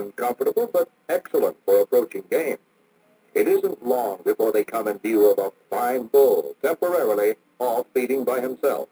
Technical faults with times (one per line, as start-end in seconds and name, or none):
0.00-8.92 imaging from sample-and-hold upsampling